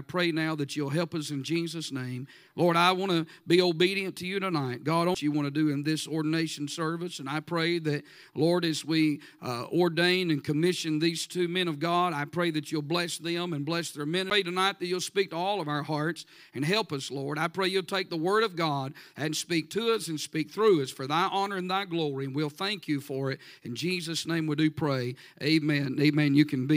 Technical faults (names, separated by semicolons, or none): CD skip